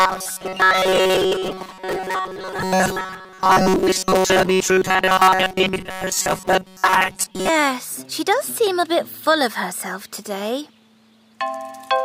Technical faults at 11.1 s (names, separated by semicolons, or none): none